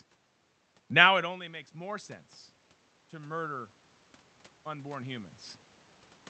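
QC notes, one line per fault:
1.07–2.20 s, 3.10–3.79 s, 4.64–5.38 s, automatic gain rising: each time the input drops by about 21 dB, the gain control slowly climbs back by about 3 to 4 dB. Voice and room noise swell together over roughly a second, and the first starts just after the talker leans away near 1.0 s.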